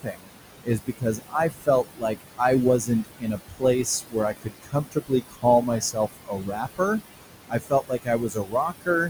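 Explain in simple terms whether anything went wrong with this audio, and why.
Something did go wrong. Throughout, noise suppressor artifacts are present: the filter pulls the room's background noise down hard between phrases and lets it back up under the speech, unlike steady, even room noise.

The suppressor also caused speech cut by the noise suppressor. It mistook parts of the talking for noise and turned them down with the background, at 0.03 to 0.32 s, 0.64 to 2.41 s, 2.8 to 3.64 s, 3.83 to 5.45 s, 5.61 to 6.81 s and 7.49 to 8.89 s. Soft sounds and word endings come out swallowed or faint.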